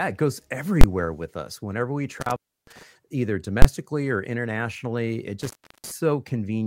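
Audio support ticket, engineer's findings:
Invalid numbers at full scale: single loud bangs at 0.81 s (between "it goes" and "with us") and 3.62 s (just before "or internationally it"). Each lasts about 23 ms, which fits a 1024-sample processing block. A calculation produced invalid values that were pinned to full scale. Waveform: flat slab at one extreme. Spectrogram: full-band vertical stripe.

Intermittent contact: dropouts at 2.21–2.83 s and 5.42–5.92 s, the second right after "or internationally it". Probable loose cable or plug. The line opens for about 310 ms and 340 ms, with crackle at each edge and faint hiss between. Spectrogram: gap in the speech energy bracketed by broadband clicks.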